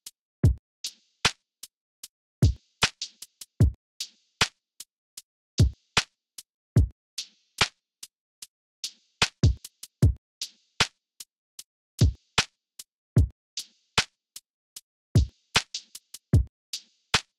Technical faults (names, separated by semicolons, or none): drift correction step